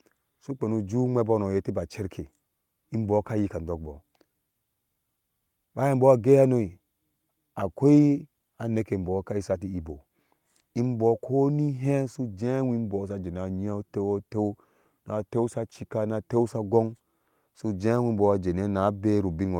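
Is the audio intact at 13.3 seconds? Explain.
Yes, the audio is intact at 13.3 seconds, with no audible fault at that moment.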